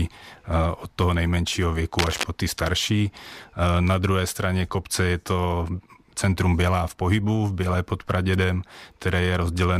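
A speech recording with a burst of cable scratch noise from 1.99 to 2.24 s: a quarter-second of dense, ragged scratching laid over the speech, nearly as loud as the speech itself. It is likely a worn cable or connector being moved, its contact resistance jumping erratically. On a spectrogram it shows as a smeared, broadband patch of irregular vertical streaks; the waveform carries jagged, uneven spikes riding on the speech there.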